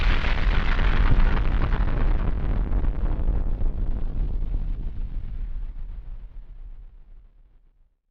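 At about 1.11 s, lost LE Audio frames cause a brief dropout. Roughly 15 ms of the Bluetooth stream never arrived, which fits two 7.5 ms frames. The LC3 decoder covered the gap by repeating the last spectrum with randomised signs. The loss is too short for any fade to set in. It sounds like a tiny, noisy smear where the tonal detail briefly turns grainy. Light lossy compression runs under the whole clip.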